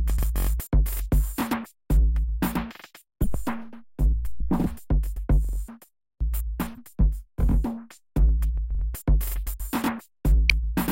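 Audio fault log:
3.22–3.27 s, 6.74–6.78 s and 10.50 s: corrupt frame decoded. Each event is a brief chirp or burst of noise. Damaged bits in a compressed frame were decoded anyway, so misread gains and codes pushed energy into the wrong frequencies for roughly the span of the bad data. The first, longer blip suggests a couple of frames were hit, and the middle one a single frame.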